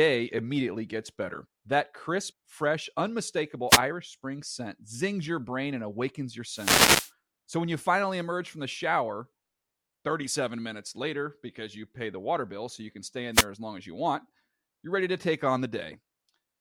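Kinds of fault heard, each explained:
Wireless microphone noise hit: the radio link fades, letting receiver static through. Brief swishes come at 3.7 and 13.3 s, a longer burst from 6.5 to 7.1 s.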